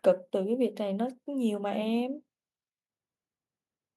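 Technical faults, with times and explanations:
No technical faults can be heard in this speech.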